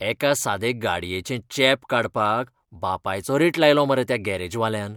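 Speech recording, no audible faults.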